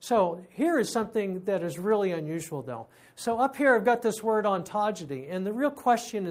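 No technical faults are audible.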